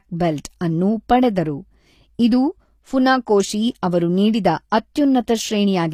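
From the start, the whole speech clip carries the sound of HE-AAC compression, likely caused by a low-bitrate encode; the damage is plainly audible and fits roughly 24 kbps. The upper spectrum is rebuilt rather than coded, copied up from lower bands, so s sounds come out gritty and lispy and the treble's harmonics fail to line up with those below. On a spectrogram the treble shows blocky, repeated patches, with nothing above 15 kHz.

At about 4.70 to 4.72 s, just after "ಇದು ಫುನಾಕೋಶಿ ಅವರು ನೀಡಿದ", there is pre-echo. A sharp onset landed late in a coding block, and the noise allotted for that loud moment was spread across the whole block, filling the quiet space before the attack. A short hiss runs ahead of the onset for about 21 ms, and the attack sounds softened. On a waveform a thin noise smear precedes the transient, and a spectrogram shows a broadband haze just before it.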